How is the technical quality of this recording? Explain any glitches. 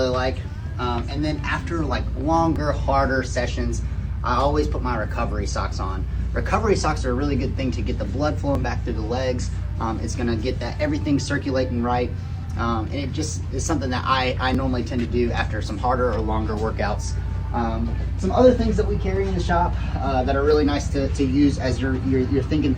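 The recording has two technical faults: a constant mains buzz and four brief, regularly spaced skips.

Mains buzz runs through the whole clip, around 40 dB below the signal. Sharp switching spikes, recurring twice per 60 Hz cycle, inject a stack of 60 Hz harmonics into the audio. The result is a steady, raspy buzz under everything.

Audio missing between chunks shows up at 2.56, 8.55, 14.55 and 20.54 s, about 6 s apart. At each point a few milliseconds of sound vanish and the two sides are butted together, heard as a tiny skip or click. This is likely a processing stage handling 6-second chunks and dropping a sliver at each boundary.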